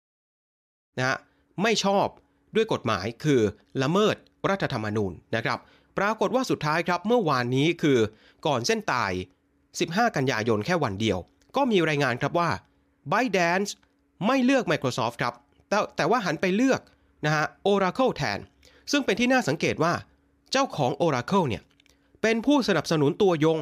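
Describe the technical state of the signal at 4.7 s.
At 4.7 s the speech signal is intact, with no audible technical fault at that moment.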